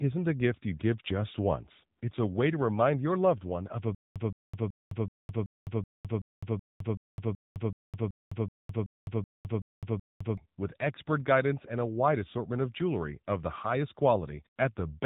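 Throughout the speech, the signal has passed through the AMR narrowband mobile codec. Band-limited coding strips everything above about 3.8 kHz, and the pulse-driven vocal-tract model gives plainly audible buzzy, synthetic damage, which fits a low rate around 8 kbps.

From 3.95 s to 10.37 s comes a stutter with silent gaps, likely from playback stalling and retrying. A 169 ms fragment replays 17 times, each followed by 209 ms of digital silence, repeating every 378 ms, and the audio meant for that span is lost.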